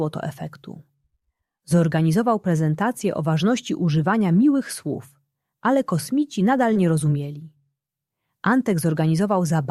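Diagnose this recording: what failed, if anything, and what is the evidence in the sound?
The network stage failed briefly: short concealed packet loss at 6.73–6.77 s. About 20 ms of audio never arrived, and the decoder extrapolated the preceding sound to fill it, heard as a brief smear. A spectrogram shows a short, overly uniform stretch where detail flattens before blending back.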